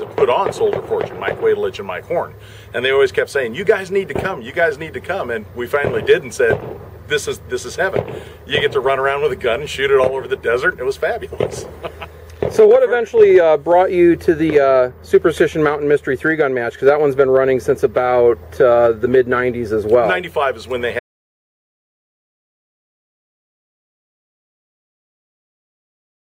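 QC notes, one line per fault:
21.00 s to the end: audio dropout to silence. The sound cuts off abruptly mid-flow and never returns; the remaining 5.3 s are silent with no room tone, likely from a lost input while recording continued. The waveform is a flat line and the spectrogram blank.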